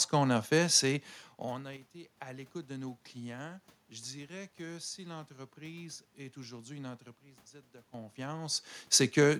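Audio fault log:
1.77–2.14 s and 7.15–7.94 s, sudden gain jump: the digital level drops abruptly, by about 7 dB in the first stretch and about 12 dB in the second, then returns, likely from a gain setting applied with no ramp. Speech and room noise fall and recover together, which separates these steps from the talker's own movement near 1 s and 8 s, where only the voice level shifts.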